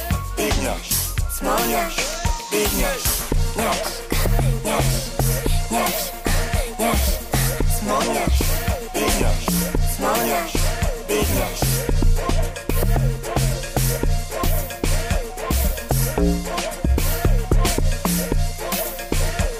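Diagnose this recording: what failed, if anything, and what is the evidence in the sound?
Nothing here points to a failure at any stage of the chain, so there's no problem in this recording to chase down.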